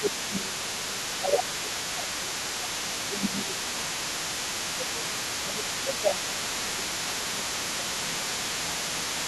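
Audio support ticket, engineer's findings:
Speech suppressed in double talk, 0.0–4.01 s, 4.63–5.14 s, 5.43–9.28 s: talker dips up to about 20 dB, patchy. Likely echo canceller ducking near-end while far end talks.

Other side's voice leaking through, 0.03 s to end: far-end voice audible roughly 20 dB under talker. Likely residual loudspeaker echo the canceller failed to remove.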